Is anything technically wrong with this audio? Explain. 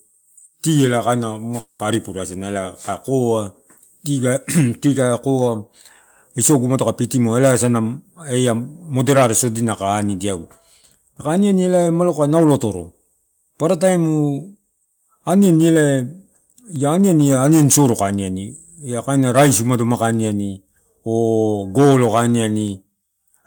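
Yes. A long network dropout occurs from 1.59 to 1.81 s. Incoming audio likely stopped arriving, so the receiver stretched the last sound into a fading buzz for about 0.2 s. The speech then resumes directly, with no silence, but that 0.2 s is gone.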